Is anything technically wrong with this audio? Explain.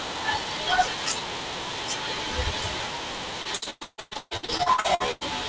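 Yes. From 3.42 to 5.23 s there is repeated packet loss (robotic sound): audio packets kept arriving late or not at all, and each hole was bridged by extending the preceding sound. About half the span is concealed, with gaps up to 150 ms, leaving speech choppy with pieces missing. The band ends at 8 kHz, consistent with a wideband call codec.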